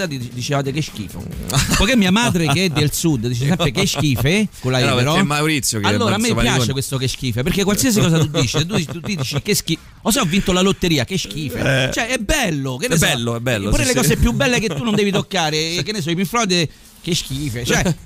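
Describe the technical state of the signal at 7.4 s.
At 7.4 s the signal is intact, with no audible dropout, distortion or other fault at that moment.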